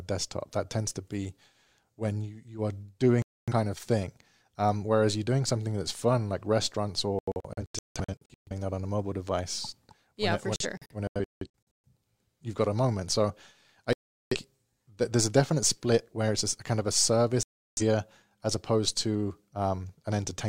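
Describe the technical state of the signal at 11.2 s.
At 11.2 s the receiver is losing frames and muting, a digital broadcast dropout from 10.56 to 11.46 s: the speech breaks into short silent holes, the longest 0.17 s, and that content is gone.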